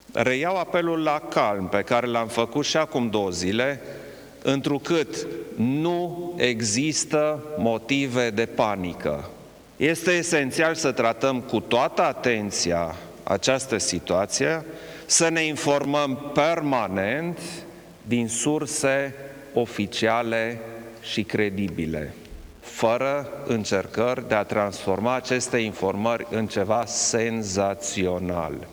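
From start to finish there's a grainy distortion riding on the sound. It gets rougher as things get quieter, and the softest moments break up into a gritty sputter or drop out to nothing. That's the signature of low bit depth without dither, most likely the audio rounded to something like 8 bits with no dither added. The error tracks the signal, and it lands roughly 30 dB below the level.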